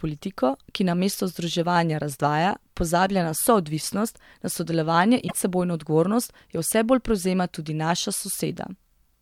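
At 5.24 to 5.34 s, after "na soodvisnost na sodelovanje", damaged data in the compressed stream makes the decoder lose sync briefly before "odgovornost jo vse bolj".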